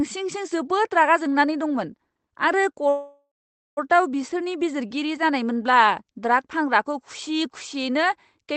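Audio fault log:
2.89–3.79 s, call audio freeze: the speech smears into a fading buzz, then about 0.5 s of silence, and resumes intact, likely from delayed packets draining the jitter buffer.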